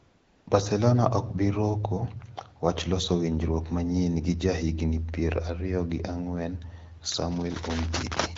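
From 0 to 0.47 s, AMR comfort noise replaces the real background: no speech frames are sent, so the receiver plays a steady, smooth synthetic hiss before the HD Voice speech begins.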